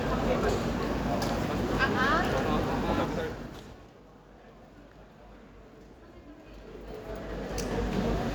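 Zipper noise, 2.99 to 4.01 s and 6.36 to 7.94 s: the level drops about 25 dB, then rises about 25 dB, in unsmoothed 3 dB steps, each clicking audibly, so a ticking rides the fades.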